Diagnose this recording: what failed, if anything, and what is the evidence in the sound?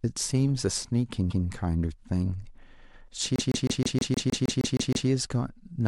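Repeated frames in the codec or storage stage: a 157 ms block of compressed audio replays once at 1.29 s, then eleven times from 3.36 to 5.08 s, causing stutter.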